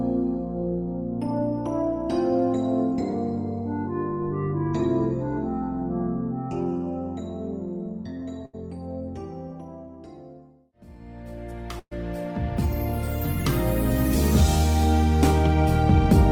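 At 8.45 s and 11.79 s the sound smears into a brief held, fading sound, the second dropping to silence, before jumping ahead: a burst of packet loss, with roughly 80 and 120 ms concealed.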